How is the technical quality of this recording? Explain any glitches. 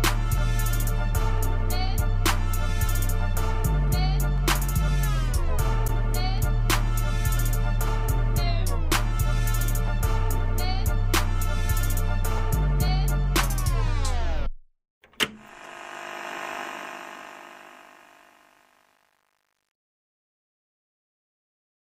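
The fade-out at the end is damaged. From 16.59 s to 21.90 s there is truncation distortion on the fade, worst from 17.68 s onward. The fade stage drops low bits without dither, which fits roughly 9-bit resolution, so the fading waveform collapses into coarse steps. It turns gritty. Unlike a noise gate's clean chopping, the grit tracks the falling level.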